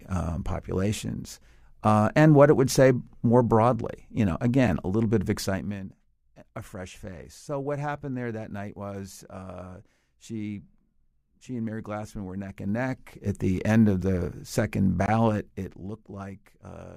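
Right after "a little bit of", from 5.38 to 5.83 s, there's zipper noise. The level drops by something like 15 dB in 2 dB steps, about twenty a second, with no smoothing between them, so each jump leaves a small click and you hear a quick zipping ride over the speech. The same thing happens from 12.44 to 13.36 s as the level comes back up by roughly 15 dB, this time at around ten steps a second, so the ticks are slower and easier to count. A third pass runs from 15.24 to 16.03 s, pulling down about 10 dB at that same slower rate.

There are also two blocks of digital silence, where samples were swapped for zeros, probably because the output buffer wasn't filled in time. At 14.02 s, between "the end of" and "the second", a 5 ms hole cuts to dead silence and back with hard edges, so it comes across as a single tick. Then just after "end of the second", from 15.06 to 15.08 s, a 20 ms dropout is long enough to register as a brief pop with a tiny gap inside it.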